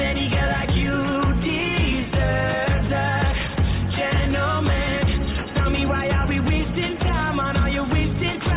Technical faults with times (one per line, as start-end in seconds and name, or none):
none